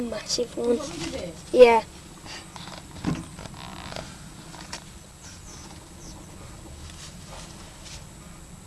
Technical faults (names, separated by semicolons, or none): none